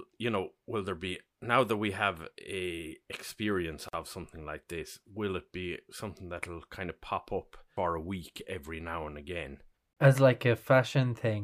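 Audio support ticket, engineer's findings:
Brief dropout in continuous speech, edges smeared, speech resumes where it stopped. 3.89–3.93 s, about 47 ms, between "we have a experience" and "of something like this". Gap at a join of encoded pieces.

Same symptom at 9.93–9.97 s, about 34 ms, after "every now and again". Spacing is 6.0 s, so the segments were encoded separately and concatenated untrimmed. Encoder start delay and last-frame padding are left in at each joint.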